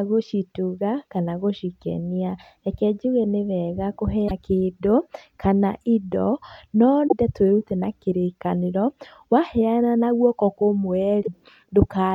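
At 4.27 s after "nĩ wega", 7.07 s after "kĩndũ kana indo na", and 11.22 s, the speech skips ahead through 40 to 60 ms of damaged audio, likely a broken MP3 bit reservoir: after dropped frames, the decoder borrows bytes from the wrong frame. The damage lasts about two 26 ms frames.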